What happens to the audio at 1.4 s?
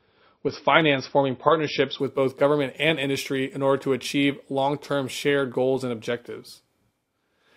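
An adaptive stream starting at a low bitrate runs from 0.0 to 2.0 s: the player opens on a lean encoding, consistent with 24 kbit/s MP3, so at 1.4 s nothing sounds above 5.8 kHz and codec smearing is audible, until quality jumps abruptly at 2.0 s.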